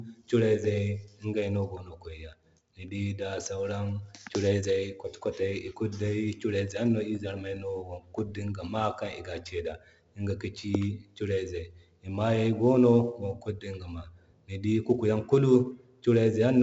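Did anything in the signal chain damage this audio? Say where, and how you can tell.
Yes, at the codec stage: 4-bit ADPCM compression runs through the whole speech clip. A gritty hiss rides on every louder syllable and sinks in the pauses, and sharp onsets break up because each sample is a coarse 4-bit step whose size adapts too slowly to catch attacks. Nothing is present above 7.7 kHz, which fits a 64 kbps stream. Plain low-bit quantisation noise would stay constant through the quiet gaps.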